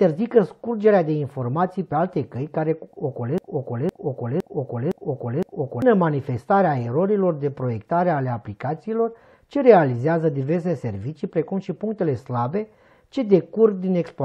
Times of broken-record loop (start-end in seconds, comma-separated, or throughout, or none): 3.38-5.82